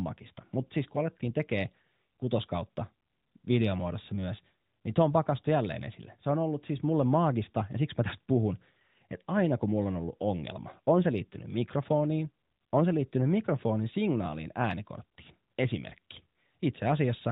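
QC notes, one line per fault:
No faults to note for this speech clip.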